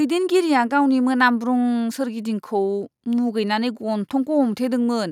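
No technical faults can be heard in this recording.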